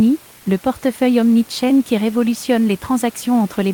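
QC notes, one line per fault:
0.37–0.45 s, comfort noise in place of the background: for about 80 ms just before "le portefeuille", the room noise, which sits about 29 to 31 dB below the speech, turns into a flat, textureless hiss, only about 1 dB quieter than the real background. The likely cause is discontinuous transmission: the sender's voice detector judged the gap silent and stopped sending audio, so the receiver filled it with synthetic noise shaped like the background. This fits a DTX scheme such as Opus's.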